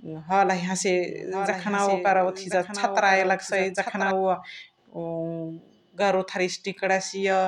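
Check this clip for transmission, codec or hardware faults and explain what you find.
One fault stands out: a doubled audio track from 1.05 s to 4.11 s, just after "हलही हसे". A second full-band copy of the speech runs about a second late and roughly 10 dB quieter. This is likely a slower second capture path mixed in. On a spectrogram the speech patterns repeat, faded and shifted right, with no reverberant smearing. The copy appears and disappears abruptly at the edges of that span.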